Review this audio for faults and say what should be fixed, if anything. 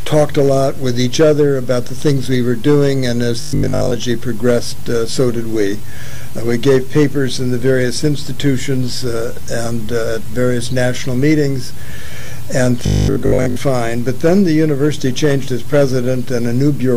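Robotic sound from repeated short buffers shows up twice, 3.41 to 3.97 s and 12.86 to 13.56 s: a rigid 50 Hz metallic buzz, likely from a 20 ms chunk looping while most of the real audio gets skipped. To prevent it, enlarge the playback buffer so fresh audio never runs dry.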